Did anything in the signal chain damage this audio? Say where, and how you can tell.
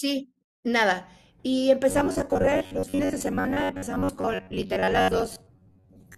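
Yes. From 1.89 s to the end at 6.17 s, the speech turns into a rigid, metallic buzz at about 93.8 Hz: robotic sound from repeated short buffers. This is likely a driver or buffer stage repeating a roughly 10.7 ms block, with about half the audio skipped.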